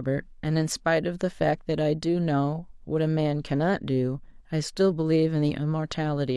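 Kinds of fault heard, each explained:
No technical faults can be heard anywhere in this speech recording. There is nothing to list under any kind of fault.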